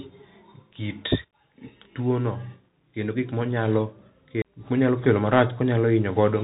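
From start to finish the speech goes through a Bluetooth CVSD headset codec, the narrowband one-bit delta scheme, which fits a 64 kbps link. Nothing gets through above about 3.8 kHz, the adaptive step can't keep up on sharp high sounds, so s sounds come out scratchy, and a grainy hiss sits under everything.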